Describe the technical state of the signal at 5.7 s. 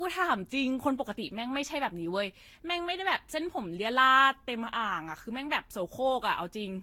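At 5.7 s the speech carries generation loss, present throughout the clip: a swirly, hollow, smeared texture with softened attacks and nothing above 17.9 kHz. This is likely from roughly seven lossy passes, each re-quantising on a shifted frame grid, consistent with repeated Vorbis encoding near 60–70 kbit/s.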